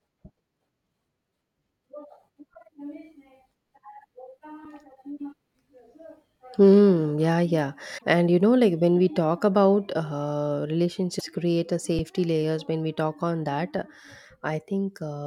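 At 2.54 s and 4.65 s the speech freezes on a flat held level for 8.2 ms and 5.3 ms, an underrun with held sample. The output buffer ran dry and the converter held its last value, so the sound stops without a click. Essentially nothing was lost and playback resumes where it stopped, so the restart is soft. The 5.3 ms gap fits a 256-sample buffer.

From 7.97 to 8.03 s, and again from 11.18 to 11.21 s, the audio skips forward. This is likely a broken MP3 bit reservoir. After frames were dropped, the following 26.1 ms frames read borrowed bits from the wrong frame.

At 11.99 s a second 5.3 ms underrun with held sample leaves another silent flat hold.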